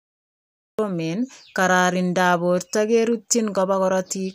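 Cut-off start at 0.79 s: capture began late, so the speech emerges abruptly from digital silence mid-sound, with no natural attack or fade-in.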